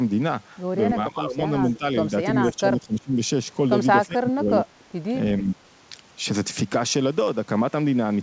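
Speech suppressed in double talk hits the talker five times: 0.94 to 1.42 s, 1.78 to 1.84 s, 2.52 to 3.2 s, 4.06 to 4.82 s and 5.41 to 5.6 s. Each time the voice sinks by about 15 dB, and by about 20 dB in the fourth stretch, thinning or breaking into pieces. The likely cause is an echo canceller that, with both ends talking, mistook this voice for loudspeaker echo and turned it down along with the echo.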